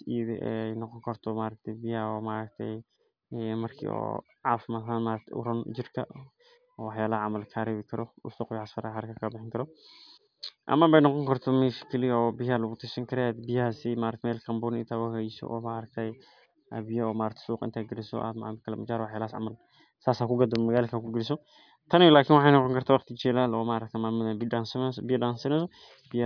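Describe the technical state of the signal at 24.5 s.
At 24.5 s the speech signal is intact, with no technical fault present at that moment.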